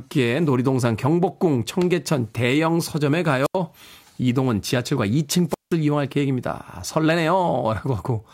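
Speech with two wireless microphone squelch dropouts, at 3.43–3.56 s and 5.49–5.75 s, where a fading radio link briefly lets hiss rise before the receiver mutes for about 83 ms, then about 175 ms. A spectrogram shows a short broadband hiss smear, then near-empty gaps.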